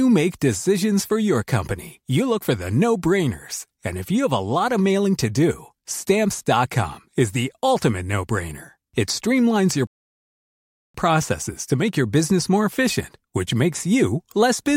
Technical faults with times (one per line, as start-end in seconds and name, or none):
9.87-10.94 rebuffering stall